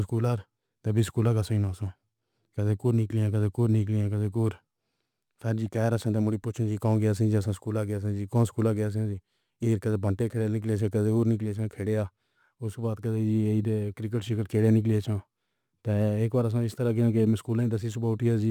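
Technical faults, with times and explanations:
Throughout, crude rate conversion: a gritty, inharmonic fizz rides on the speech, strongest on loud and bright sounds, around 35 dB below the speech. The pattern fits 44.1 kHz audio converted to 48 kHz by repeating nearest samples without filtering, creating unrelated alias tones.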